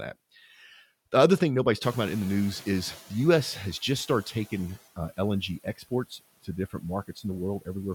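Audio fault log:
1.82–4.73 s: noise suppressor catching up. Just after "other thing nobody's", the room noise jumps by about 15 dB, at around 2 s, to about 20 dB below the speech. The suppressor's noise estimate is still set for the quieter level. So the new noise passes through with little reduction. Over about 2.9 s the estimate adapts. The background then sinks by about 13 dB. The room noise itself is part of the recording.
5.64–5.92 s and 7.08–7.24 s: speech cut by the noise suppressor. In each span the suppressor mistakes part of the speech for background noise. It turns that part down along with the noise, for roughly a tenth of a second each time. The first drop reaches about 19 dB, the second about 13 dB. Those moments sound swallowed and faint.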